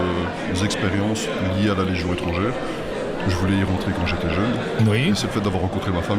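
Nothing here trips the ear at any point; the audio just runs along without a single glitch worth pointing to.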